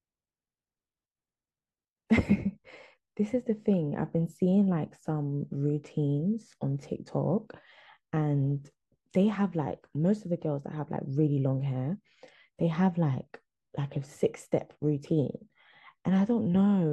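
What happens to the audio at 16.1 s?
At 16.1 s the speech carries on intact, with no dropout, click, distortion or other fault at that moment.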